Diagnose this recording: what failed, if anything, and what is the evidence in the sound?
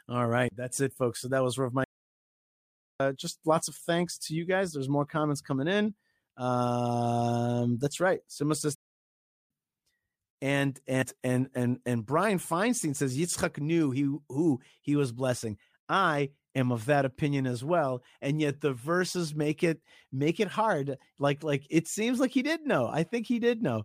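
The speech cuts to silence mid-flow from 1.84 to 3.00 s, a gap of about 1.16 s, and again from 8.75 to 9.50 s, about 0.75 s, then resumes. This points to a playback stall at the playback stage, likely the player starving for data or its thread being blocked.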